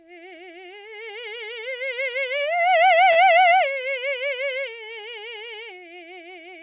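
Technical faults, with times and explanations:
3.12 to 3.18 s, short stall from a late packet: the music briefly hangs, a sound held about 36 ms too long with a faint buzz or dip, while the receiver waited for a delayed packet, then resumed where it left off. Unlike a dropout, nothing is skipped; everything after simply arrives 36 ms later, over a band that stops at 4 kHz.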